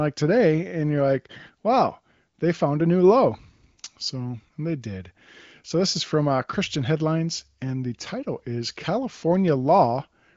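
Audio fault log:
No faults are heard in this speech clip. It has passed through the AMR wideband (HD Voice) codec at a high rate, around 23 kbit/s, and the audio carries nothing above roughly 7.6 kHz.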